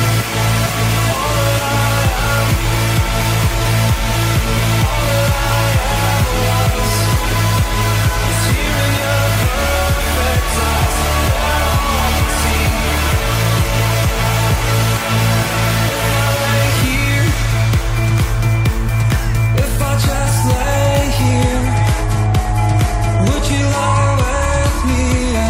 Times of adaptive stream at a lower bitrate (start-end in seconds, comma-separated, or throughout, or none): 21.24-25.49